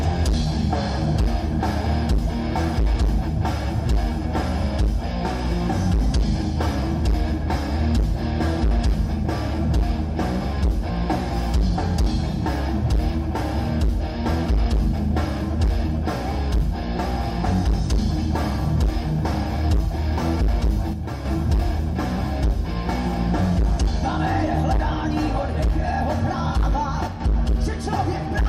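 One channel drops out from 20.93 to 21.25 s and again from 27.07 to 27.20 s. The sound abruptly falls by about 6 dB, likely because one stereo side was lost before the mono sum.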